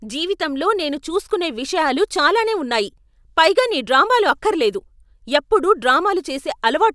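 No technical faults can be heard anywhere in this recording.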